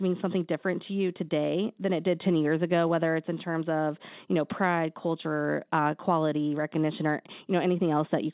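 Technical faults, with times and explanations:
Nothing here counts as a technical fault; the speech has just come over a regular call connection, so it sounds phone-like with nothing above 4 kHz, which fits a G.711 codec.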